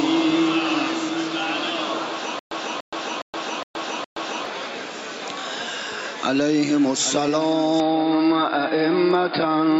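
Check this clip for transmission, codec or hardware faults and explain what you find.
Two faults are audible.

Gain pumping runs throughout. The gain ducks around 20 dB under loud sounds. This is likely excessive gain driving a fast limiter.

A stutter with silent gaps occurs from 2.39 to 4.46 s. A 293 ms burst repeats five times, each followed by 120 ms of silence. This is likely a stalled stream replaying its last fragment.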